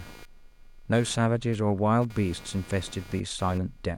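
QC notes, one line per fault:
Throughout: computer activity noise, a buzzing around 200 Hz roughly 25 dB below the speech, from the computer's load changes shifting the audio circuit's shared ground.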